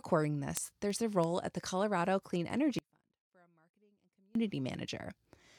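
From 0.24 s to 5.55 s, word clock ticks recur roughly every 0.3 s, about fifteen in all. The receiving device free-runs against the sender's clock, and the two drift by something like 70 ppm, so one sample slips at each crossing. The clicks' steady spacing distinguishes them from random digital crackle.

Between 2.79 s and 4.35 s the speech drops out abruptly for 1.57 s. What remains is a faint residue around 35 dB below normal, likely a lost input feeding a still-live path. The hard edges, with no decay, set it apart from a natural pause or fade.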